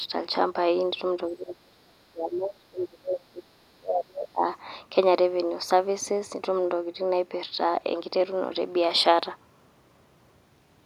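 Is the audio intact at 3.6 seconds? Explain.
No. At 3.6 seconds the speech falls inside a stretch of speech suppressed in double talk, running from 1.34 to 4.45 s. The likely cause is an echo canceller that heard both ends talking at once, could not tell the local talker from the returning loudspeaker echo, and pulled the level of everything down. The speech sinks sharply, by roughly 30 dB at its deepest, across about three seconds.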